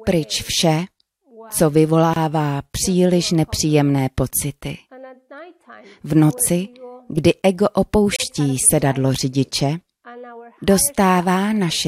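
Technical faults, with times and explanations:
2.14–2.16 s and 8.16–8.20 s, gap at a join of encoded pieces: separately encoded six-second pieces were joined untrimmed, leaving codec delay and padding as silent dropouts of about 26 and 37 ms with smeared edges.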